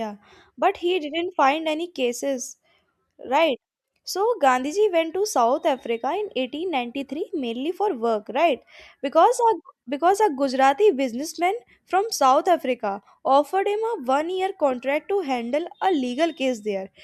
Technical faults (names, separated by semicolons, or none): none